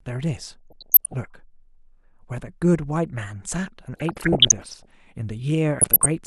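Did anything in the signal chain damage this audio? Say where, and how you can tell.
Yes. DAB burbling at the codec stage affects the speech at 0.39–1.26 s, 3.93–4.91 s and 5.79–6.06 s. Bit errors slipping past error correction corrupt MP2 samples and scale factors, so single sub-bands flare for up to a frame. A spectrogram shows scattered, short rectangular blocks in narrow bands.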